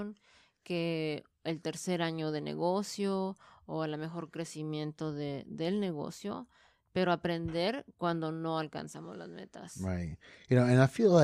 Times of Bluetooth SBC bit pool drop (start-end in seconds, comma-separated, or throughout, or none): none